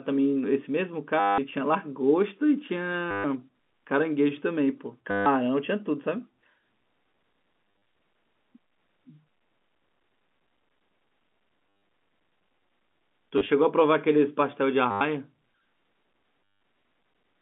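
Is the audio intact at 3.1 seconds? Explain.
No. From 3.11 to 3.24 s, about 130 ms of packets were lost and the last one replayed, which points to 10 ms packets, giving a roughly 100 Hz robotic buzz.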